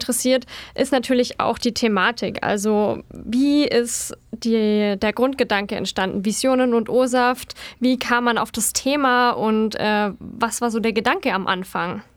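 No technical faults are audible anywhere in the recording.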